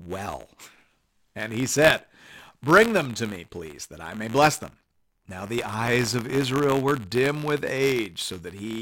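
Buffer tearing runs through the whole clip: the writer and reader of the audio ring buffer have drifted so they cross within each period, splicing a small sliver of audio about 20 ms stale into every buffer. The hard joins produce a rattling 86.1 Hz buzz, which fits a 512-sample buffer, heard only while speech is present.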